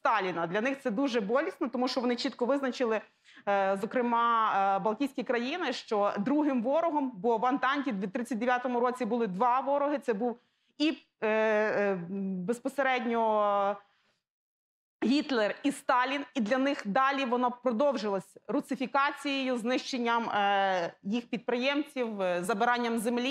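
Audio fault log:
22.04–23.31 s, pre-emphasis left on: over the last stretch of the clip the treble rises sharply, about 11 dB at 10 kHz relative to 1 kHz, following a 50 µs FM-style curve. The high-frequency boost applied before recording or transmission was never undone by the matching de-emphasis. With the top end lifted and nothing cutting it back, the sound turns thin, bright and sibilant for that section.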